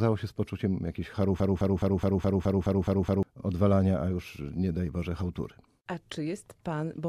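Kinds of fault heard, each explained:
Broken-record loop: after "się z poczuciem jakiejś", a 0.21 s fragment of speech repeats exactly, back to back, nine times from 1.40 to 3.23 s, likely from a stalled player or stream resending its last fragment. The audio for that span is lost before "odwalania a już nie".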